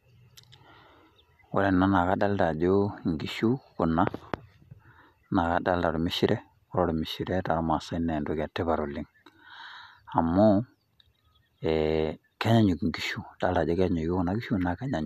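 No technical faults are audible.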